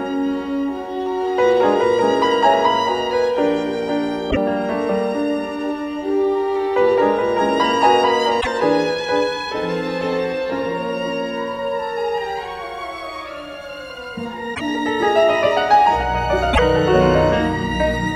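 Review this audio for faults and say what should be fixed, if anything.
Sample clock jitter runs through the whole clip as a faint roughness about 50 dB below the signal. A clock wobbling by well under a microsecond mistimes samples most where the waveform moves fastest. Unlike steady background hiss, it swells on loud, bright passages and vanishes in silence. A cleaner, properly locked converter clock prevents it.

At 4.30–4.37 s, 8.40–8.47 s, 14.54–14.61 s and 16.52–16.59 s the audio jumps ahead and roughly 70 ms comes out garbled, about three 26.1 ms frames. The likely cause is a broken MP3 bit reservoir: after frames went missing, the following frames looked back for borrowed data and decoded bytes belonging to another frame. A simple dropout leaves a clean gap, but this fault skips forward and damages several frame-lengths of audio. Editing or streaming MP3 only at frame boundaries where the reservoir is empty, or re-encoding from the source, prevents it.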